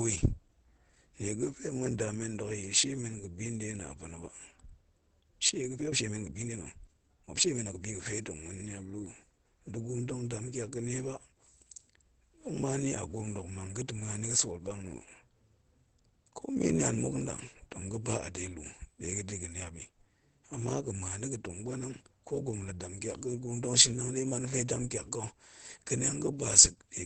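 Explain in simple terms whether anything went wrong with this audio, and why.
Opus compression, throughout the speech: it sounds muffled and hoarse, with nothing above about 8.5 kHz, likely from heavy squeezing into a low-quality speech mode.

Time-stretched section, 5.67 to 7.91 seconds: the speech suddenly rushes along about 1.58 times faster but keeps its pitch, likely from software dropping short slices.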